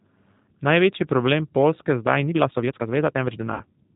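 A speech clip coded throughout with the G.729 codec, at 8 kbit/s. Nothing above 4 kHz survives. The voice sounds rough and slightly synthetic, rebuilt from a filter, a pitch predictor and a few pulses per frame. From 3.54 to 3.63 s, VoIP packet loss concealed by the speech codec is heard. About 60 ms of audio is missing, which fits three lost 20 ms packets. The decoder stretches the last sound into a fading buzzy tone or coloured noise, and the voice stays weak briefly afterward.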